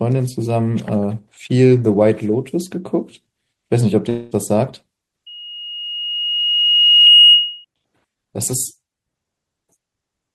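From 4.09 to 4.33 s the speech is replaced by a fading, buzzy continuation of the last sound, lasting about 0.22 s, before it picks up again with that stretch gone. This is likely a long network dropout, with the receiver filling in for audio that never arrived.

From 5.26 to 7.65 s a single tone at 2.9 kHz swells over roughly two seconds into a squeal, reaching around 10 dB above the speech. This is loudspeaker feedback squeal: the microphone picked up its own loudspeaker, and the loop's gain at that frequency exceeded one.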